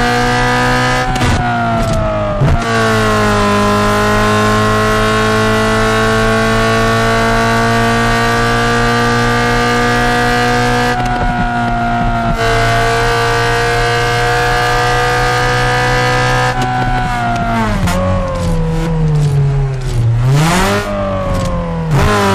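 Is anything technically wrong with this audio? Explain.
Yes. Hard clipping runs through the whole clip: the signal is driven about 12 dB beyond what the stage can pass, so around a tenth of the samples hit the limit and are flattened. Those squared-off peaks add high harmonics, giving every loud sound a harsh fuzz.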